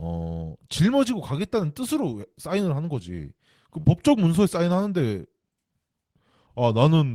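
Short concealed packet loss occurs at 3.80 s and runs to about 3.85 s. Around 30 ms of the speech failed to reach the decoder in time, and the receiver covered the gap with roughly 39 ms of synthesised audio, extending the preceding sound from its pitch or as shaped noise before crossfading back into the real signal. The result is a brief smear or wobble in the speech, and a short consonant there could be lost.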